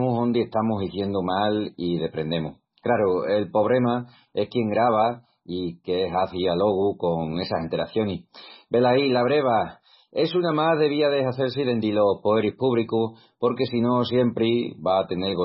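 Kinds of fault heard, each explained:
MP3 compression: the whole speech clip has the dull, swirly sound of a starved encoder, likely a heavily squeezed MP3 at a very low bitrate, somewhere around 16 kbps. There's nothing above 5.5 kHz, so the s sounds lose their edge and the top end just stops. With so few bits to go round, the weak frequency lines keep dropping in and out from frame to frame, and that's the watery warble you hear behind the voice.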